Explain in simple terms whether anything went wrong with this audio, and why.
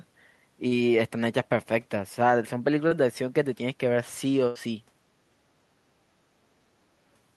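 Yes, a few small pieces of this speech went missing on their way through a call connection.

There are two cases of short concealed packet loss, at 0.67 to 0.74 s and at 2.87 to 2.94 s. Each time, about 40 ms of sound never arrived in time. The receiver patched the hole by stretching out the sound just before it, then blended back into the real speech. You hear a quick smear or wobble. A short consonant there could vanish.

At 4.47 to 4.58 s there is a burst of packet loss. This time a longer stretch, about 80 ms, was lost in one go. The receiver again continued the last sound, fading it as the gap went on. So you hear a brief held buzz or fading hiss. Then the speech picks up a little further along, with that small piece gone.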